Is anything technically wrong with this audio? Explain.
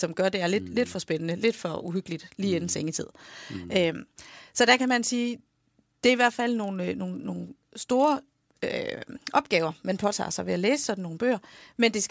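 Yes. Throughout the speech there is a regular tick at 25 Hz that sounds only while signal is present. This is a resampler restarted on every block: each 40 ms block was converted on its own, so the filter lacked real neighbouring samples at each block edge and left a small error there. The pattern fits a 44.1 kHz to 16 kHz conversion done block by block without carrying filter state across edges.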